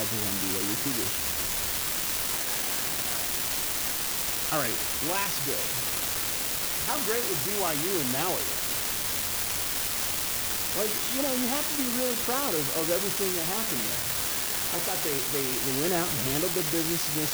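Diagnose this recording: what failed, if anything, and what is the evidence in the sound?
The failure is an unreliable data bit at the converter's digital output. A steady fizzing crackle runs through the speech and into the pauses: one marginal data line flips at random, adding equal spikes of about -17 dBFS. A stuck bit would distort the waveform instead.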